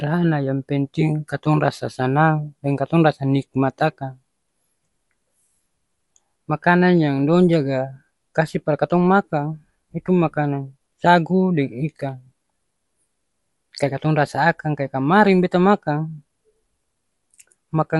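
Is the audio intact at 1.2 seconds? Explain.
No. At 1.2 s, as throughout the speech, there is clearly audible damage, likely from Dolby Digital compression. Nothing reaches above 11.5 kHz, and unfilled spectral lines decode as rough, fluttering noise, which fits a low bitrate near 64 kbps.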